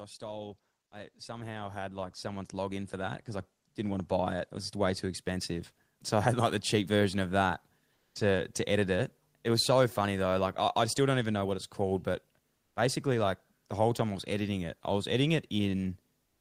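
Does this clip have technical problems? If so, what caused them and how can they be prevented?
Yes. Automatic gain rising from 0.18 to 5.54 s lifts speech and background together by about 17 dB, seen as a steadily widening waveform envelope. Setting a proper input level and disabling or slowing the automatic gain control prevents this.

Comfort noise in place of the background appears at 7.93–8.15 s (after "cheap version of that", before "to to edit it"), at 12.55–12.75 s (after "what it's called but", before "basically like the whole") and at 16.25–16.40 s. In each gap, the detailed room tone becomes steady, featureless noise within about 1 dB of the original level. On a spectrogram it shows as a smooth, uniform band. The likely cause is the codec's discontinuous transmission during pauses. Turning off discontinuous transmission on the sending side prevents it.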